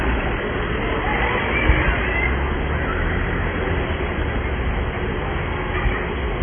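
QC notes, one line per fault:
Throughout, AAC compression: the sound is dull, with nothing above 3.4 kHz, and heavily damaged, with a smeared, warbling, fizzy texture. The likely cause is a low-bitrate AAC-LC encode, consistent with about 16 kbps. With so few bits, the encoder cuts the high band entirely and quantises what remains coarsely against its hearing model, leaving spectral holes that shift from frame to frame. This gives sustained sound its watery, unstable quality.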